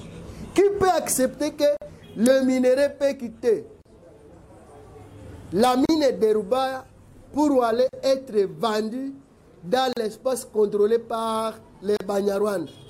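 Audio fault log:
1.77, 3.82, 5.85, 7.89, 9.93 and 11.97 s: gap at a join of encoded pieces. Continuous sound drops out in a gap of 49 ms at the first join and 38 ms at each later one, repeating every 2.0 s, then resumes where it stopped. The silence comes from each separately encoded piece keeping its encoder start-up delay and final-frame padding when the pieces were joined untrimmed. The edges of each gap are smeared by the codec, so the fully silent part is shorter than the gap.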